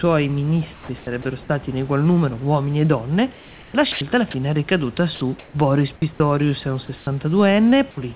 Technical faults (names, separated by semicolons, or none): sound chopped by the voice detector; comfort noise in place of the background; sound dropped by the voice detector